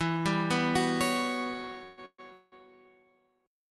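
Three call audio freezes land close together, at 1.83–1.99, 2.05–2.20 and 2.32–2.54 s: each is a fading buzz filling the gap, likely a starved jitter buffer, then the sound resumes intact.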